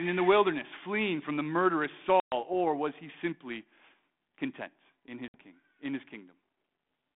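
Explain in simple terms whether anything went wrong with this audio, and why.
Packet loss on an ADPCM call hits this speech twice: at 2.2 s, about 120 ms of sound drops out, and at 5.28 s a shorter gap of about 60 ms follows. Each time, a small run of network packets never arrived, so the phone filled the hole with silence. The coding used on this telephone-band call predicts each sample from the ones before, so after a gap the receiving end briefly loses track. The sound comes back slightly distorted before settling.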